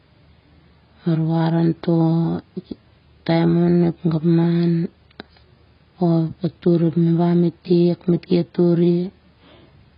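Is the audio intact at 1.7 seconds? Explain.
No. At 1.7 seconds the speech carries AAC compression artefacts that run through the whole clip. Nothing is heard above 5.5 kHz. The band above is simply missing, so the sound is dull and smeared. Heavy codec damage adds a warbling, fizzy texture to sustained sounds and sibilants. The most likely cause is AAC-LC coding at a very low bitrate, which fits roughly 16 kbps. At that rate the encoder drops high frequencies and coarsens what it keeps.

The moment also falls within a run of clock slip clicks from 0.13 to 9.51 seconds. These are faint, regular ticks, about one every half second and around twenty in all. They stand out on louder, sustained sound and vanish in silence. They likely come from two devices running on unsynchronised clocks that differ by roughly 40 parts per million. Each time the drift builds to a whole sample, a single sample is dropped or repeated, producing a tick.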